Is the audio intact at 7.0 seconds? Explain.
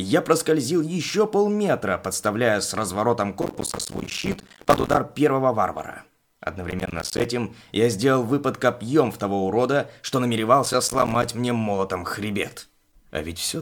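No. From 6.71 to 7.25 s a gritty burst of processor overload crackle tears through the sound. The processor couldn't finish its short buffers, likely around 5 ms each, on time, and each miss left a hard-edged gap of silence.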